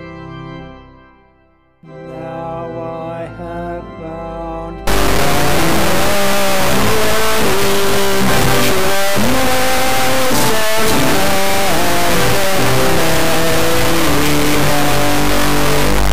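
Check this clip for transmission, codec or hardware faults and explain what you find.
One fault is present: a stuck bit from 4.87 s to the end of the clip at 16.12 s. From that point the sound turns harsh and buzzy, and the quiet passages fill with loud noise. This is likely a converter or data line holding one bit fixed at a high significance, worth a step of about -5 dBFS. Roughly half the sample values are thrown off by that amount in a pattern that follows the waveform, and that bit normally changes with the sign of small values near zero, so even silence becomes loud noise.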